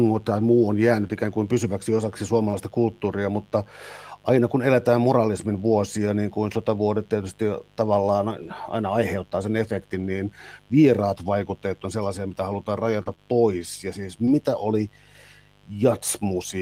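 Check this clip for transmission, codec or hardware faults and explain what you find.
There are four separate problems here: a constant hum underneath everything, plus a handful of network dropouts that the receiver covered with varying success.

Mains buzz runs through the whole clip, a steady raspy drone built on 50 Hz, sitting about 30 dB below the speech. That edgy quality rather than a soft hum comes from sharp switching spikes, probably from a dimmer, rectifier or poorly shielded cable, arriving twice per mains cycle. Those spikes spray harmonics of 50 Hz well up into the kilohertz range, so it's audible in the pauses and grinds under the speech too.

There are two short concealed packet losses. The first is at 1.07–1.11 s, where about 20 ms never arrived and the decoder extended the previous sound across the hole, giving a quick smear. The second, at 2.49–2.55 s between "ikään kuin pysyväksi osaksi" and "kulttuuria mutta aina kun", is about 40 ms long. 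You get a brief wobble where the last sound is carried forward and then cross-faded back into the real audio.

The lost packet rebuilt from error correction shows up three times: 2.53–2.55 s (the tail of that second dropout), 8.43–8.49 s just before "aina aiheuttaa sen", and 9.99–10.01 s. In each case the next packet carried a low-bitrate backup copy of the missing one, Opus in-band FEC, so nothing goes silent. The stretch at 8.43 is about 40 ms, which fits two packets. Those patches sound grainier and noisier than their surroundings.

Scattered short gaps cluster between 13.03 and 14.29 s. There are roughly three small holes, the longest around 30 ms, and together they cover about 5 percent of that stretch. Each was patched by continuing the last sound, so the speech stays clear but picks up a few little ticks and hiccups, the sort of thing you get from a few late or dropped packets spread over a second or so.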